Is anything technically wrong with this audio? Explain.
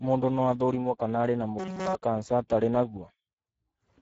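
Yes. Two faults can be heard in this speech.

The Speex codec damages the audio throughout. The coder has too few bits to describe the excitation signal, so speech turns noisy and hoarse. The damage is plainly audible. Nothing is present above 7.7 kHz. This points to a low Speex setting, near 10 kbps.

From 1.59 to 1.95 s there is robotic sound from repeated short buffers. A rigid, metallic buzz at 188 Hz replaces the natural voice for the whole stretch. The likely cause is a chunk of about 5.3 ms being replayed over and over while the real audio is skipped.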